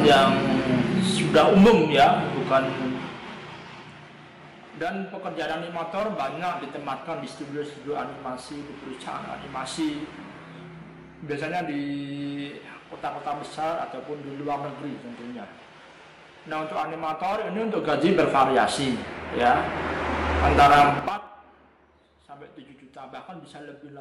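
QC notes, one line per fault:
2.88–4.37 s, 17.46–18.20 s, 20.90–21.27 s, zipper noise: gain stepped without smoothing, around ten jumps a second, 1 dB each for fades of roughly 10 dB down then up, 5 dB for a drop near 20 dB. Every jump clicks, so ticking rides the sound.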